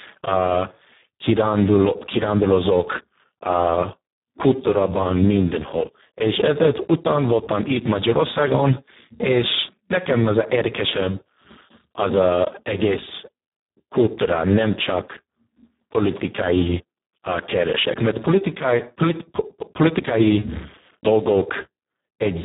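The clip is speech, and it carries Speex codec damage from start to finish. The sound is hoarse and noisy. Nothing is heard above about 3.8 kHz. The damage is heavy, which points to a very low quality setting, around 4 kbps. At that rate the CELP coder has too few bits to model the excitation.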